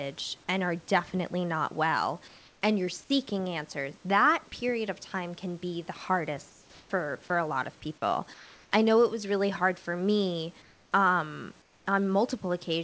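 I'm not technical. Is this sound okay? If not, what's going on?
No. In five short pauses, at 2.28 to 2.62, 6.50 to 6.90, 8.34 to 8.72, 10.62 to 10.92 and 11.62 to 11.86 seconds, each lasting a third of a second or so, the natural room background gives way to a flat, even hiss, each time a bit quieter. That's likely comfort noise in place of the background: the call stopped sending during pauses and the receiving end filled in artificial noise. Unlike a dropout, the sound never goes fully silent.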